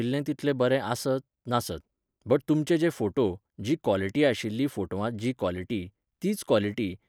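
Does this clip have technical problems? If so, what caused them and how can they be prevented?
No, there are no technical faults to report in this speech recording, so there is nothing to trace back to a cause or guard against.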